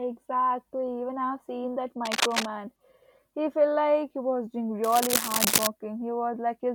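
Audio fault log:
2.05–2.50 s and 4.84–5.67 s, cable scratch noise: after "I've seen that" and "like he was doing", dense, uneven rustling bursts about as loud as the speech, likely from a worn connector's contact flickering as it moved. The scratching is dense, unlike the isolated ticks of clicks.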